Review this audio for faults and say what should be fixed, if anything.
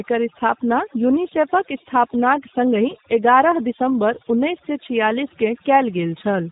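Across the whole recording the background falls to near silence, broken by twinkling specks, and the voice has its softer parts hollowed out. That is overdone noise removal: the reduction was set so aggressively that any frequency band close to its noise estimate gets pulled far down or switched off, and the quiet low-level detail of the speech disappears with it. To prevent it, apply gentler reduction with a higher floor, or record with less background noise in the first place.

Also throughout, the speech has a slightly rough, synthetic edge, clearly audible, and nothing reaches above about 3.8 kHz, so sibilants and air are missing. This is G.729 codec damage. The codec rebuilds each short frame from a vocal tract filter, a pitch predictor and a handful of pulses, and the sound fits its 8 kbit/s mode, which sacrifices high frequencies and fine texture. To prevent it, route the call or capture through a wideband codec rather than G.729.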